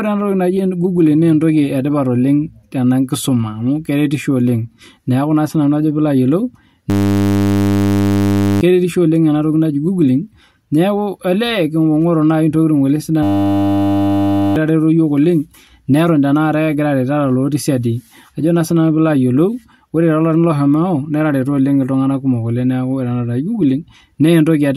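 At 6.9 s the speech cuts out into a steady buzz until 8.61 s, and the same thing happens again from 13.23 to 14.56 s. Both are a system hang loop. The machine stalled while the sound hardware kept replaying one 10 ms slice of its buffer, cycling it well over a hundred times, so you hear a 100 Hz drone. Each time, about a second and a half of the real audio is gone.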